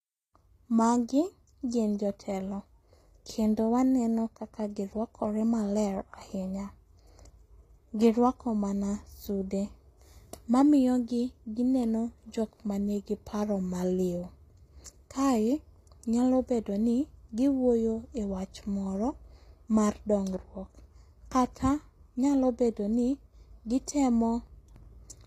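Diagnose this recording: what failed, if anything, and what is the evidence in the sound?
The failure sits at the codec stage, and the damage is plainly audible across the whole speech clip. Nothing is present above about 14.9 kHz, and sibilants come out gritty and metallic rather than clean. That points to HE-AAC compression as the likely cause, at a low rate that fits roughly 24 kbps. The upper band is synthesised by copying lower bands upward under a coarse envelope, so its harmonics fail to align with the coded lower spectrum.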